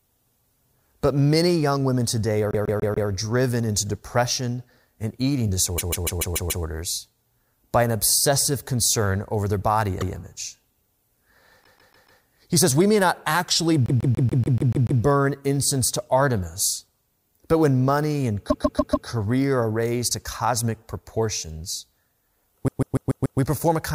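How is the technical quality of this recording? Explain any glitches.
The recording has a recurring stutter from repeated frames. The same 144 ms chunk of compressed audio gets replayed one or more times in a row, so a short piece of speech loops before the talk carries on. Each loop also makes the clip longer by the replayed time.

It happens seven times:
2.51–3.09 s, right after "many young women today" and before "driven into depression and", with 4 extra plays.
5.77–6.64 s, with 6 extra plays.
10.0–10.14 s, after "concern over their body", with 1 extra play.
11.63–12.21 s, with 4 extra plays.
13.86–15.01 s, the longest, with 8 extra plays.
18.49–19.07 s, between "but when money and" and "are raised to cosmic", with 4 extra plays.
22.67–23.39 s, with 5 extra plays.

The repeating block is 144 ms long, which fits a run of six frames of about 24 ms each being written or sent more than once.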